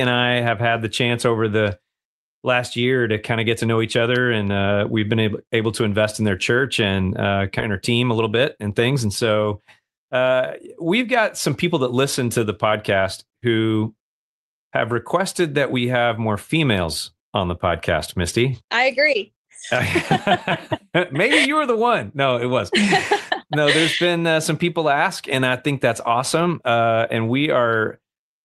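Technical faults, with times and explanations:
7.59 to 7.61 s, skip ahead: The speech jumps forward with no gap filled in. About a second of audio was dropped while later packets were already queued. The two sides of the cut join almost directly, so a chunk of the sentence simply vanishes.
7.69 to 9.80 s, jitter buffer speed-up: Right after the jump the speech runs at about 109% speed but keeps its pitch. The buffer held more audio than it wanted, so the receiver trimmed many short pitch-period pieces, about a fifth of a second in total. Delivery sounds hurried.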